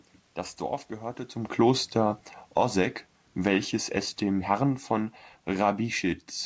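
From 1.46 to 2.78 s the speech and its room background sink together by about 6 dB, then again from 3.31 to 6.32 s by about 5 dB. This is automatic gain falling: the gain control judged the input too loud or its background noise too strong and eased its level down.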